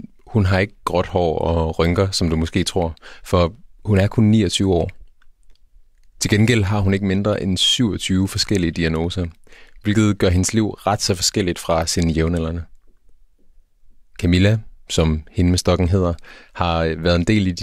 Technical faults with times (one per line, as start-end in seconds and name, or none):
none